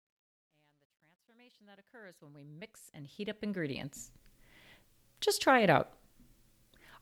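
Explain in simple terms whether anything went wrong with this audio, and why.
Truncation distortion on a fade runs from 0.0 to 4.21 s as the speech fades in, and is worst up to 2.04 s. The quiet opening sounds gritty, which fits a 12-bit volume stage with no dither that rounds the very low level into coarse steps.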